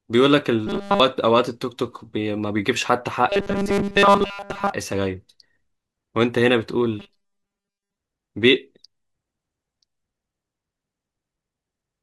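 Speech with robotic sound from repeated short buffers at 0.67 to 1.00 s, 3.29 to 4.71 s and 7.00 to 7.97 s. Each span becomes a rigid 200 Hz buzz, entirely in the first and for most of the other two, likely because audio arrived too late and a 5 ms slice was looped. Unlike general codec harshness, the buzz holds one fixed pitch regardless of the voice.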